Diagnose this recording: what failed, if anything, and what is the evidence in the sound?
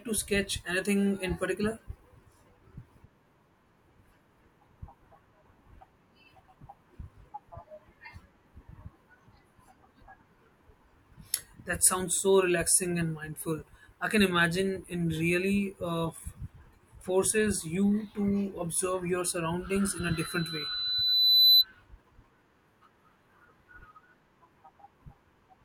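Loudspeaker feedback squeal in the analogue path, 19.98 to 21.65 s: a 4 kHz tone swells over about a second and a half to about 10 dB above the speech, as the microphone picks up its own loudspeaker with loop gain above one. The spectrogram shows one brightening horizontal line.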